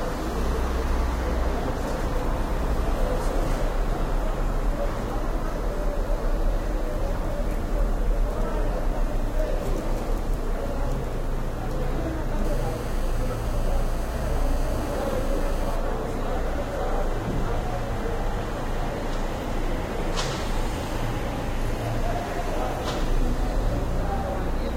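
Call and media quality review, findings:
GSM phone buzz, 12.45 to 15.76 s. Hard, raspy buzz at about 217 Hz, rich in harmonics, about 20 dB below the sound. Steady throughout, consistent with a nearby 2G phone in a call. Analogue audio path rectifying its transmit bursts.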